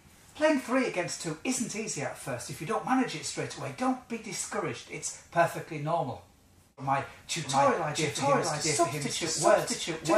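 From 6.85 s to the end, a doubled audio track is heard. A second copy of the sound joins abruptly and trails the original by about 0.7 s. It plays at roughly the same level, so the two layers compete equally. The copy is full-band and dry, with no decay or room colour. The likely cause is a second, slower capture path, or an edit holding two copies out of step.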